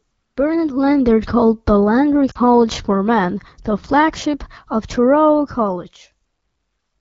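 Speech over an AMR wideband (HD Voice) link has lost AMR speech frames from 2.31 to 2.38 s. This 40 ms gap fits two missing 20 ms frames. The decoder stretches the last good sound briefly, then fades it.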